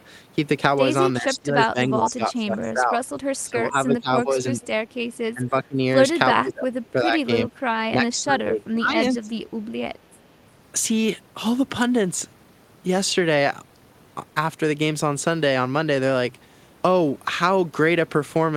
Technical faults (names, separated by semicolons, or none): speech suppressed in double talk